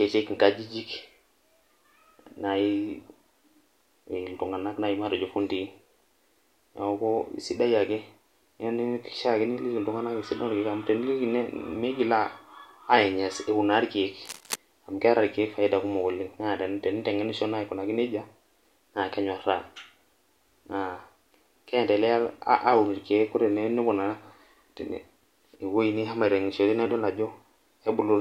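Cable scratch noise appears from 14.25 to 14.56 s, a brief patch of dense, uneven scratching and rustling laid over the speech at roughly 10 dB below it. It likely comes from a worn cable or connector being moved, its contact resistance flickering rapidly.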